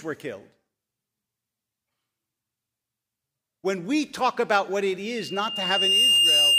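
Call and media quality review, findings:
Loudspeaker feedback squeal, 5.06 s to end, after "talk about what it". Single 2.8 kHz tone swells over about a second to about 10 dB above speech. Mic hears its own loudspeaker, loop gain above one at 2.8 kHz. Self-building swell, unlike a steady interference tone.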